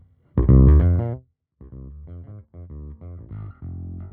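From 0.69 s to 1.63 s there's zipper noise. The level drops by something like 25 dB over that stretch, but it moves in small discrete jumps, around a hundred a second, with no smoothing between them. Every jump puts a tiny discontinuity in the waveform, so you get a fast ticking, almost buzzy zip riding on the sound while it fades.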